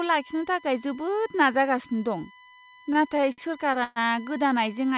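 A USB whine runs through the whole speech clip. It sits at 1 kHz, strongest at its 2 kHz harmonic, roughly 25 dB below the voice. Current drawn by the USB bus in 1 ms frames leaks into the audio through power or ground, giving a steady, fixed-pitch tone.

From 2.93 s to 3.99 s come repeated stalls (stutter). Packets arrived late, and the jitter buffer ran dry seven times. Each time, the last sound was stretched to fill the wait, the longest wait lasting 124 ms. About 249 ms of this stretch is filled-in sound. Nothing is lost, but the speech drags and stumbles. Above 4 kHz the band is empty, which fits a 64 kbps G.711 A-law call path.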